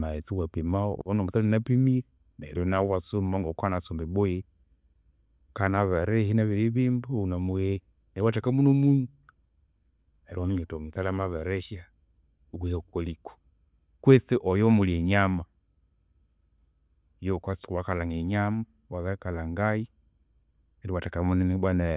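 No technical faults are audible.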